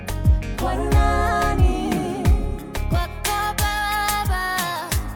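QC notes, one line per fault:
2.95–5.15 s: pre-emphasis left on. From 2.95 s to the end, the treble lift applied for recording or transmission was never undone, so the top end stands about 11 dB above 1 kHz at 10 kHz. The response tilt fits a J.17 curve, and the sound turns thin, bright and sibilant.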